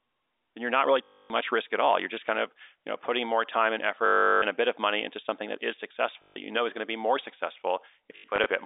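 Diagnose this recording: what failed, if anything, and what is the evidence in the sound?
Packet loss with last packet repeated, a network-stage fault, occurs at 1.04–1.3 s (after "then you're not really"), 4.06–4.42 s (after "putting more time and"), 6.22–6.36 s (after "into something that is") and in short scattered bursts across 8.16–8.46 s. The receiver fills each gap by replaying the last packet. Those loops ignore the speech's pitch period, and the longer runs buzz near 50 Hz, which fits 20 ms packets. Through the narrow G.711 telephone band, this comes across as a brief robotic stutter.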